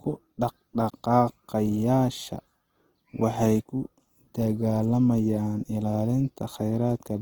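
Throughout, the speech sounds grainy, rough and noisy while keeping its full top end: likely Opus compression filling bit-starved bands with noise, which fits a 16 kbps bitrate.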